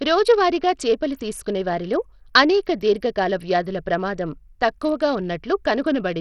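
From start to finish the speech sounds gritty and coarse, with treble that flickers and nothing above 16.9 kHz. This is likely Bluetooth SBC compression, whose simple sub-band coding starves the top bands of bits under a low bitrate, here consistent with roughly 64 kbps.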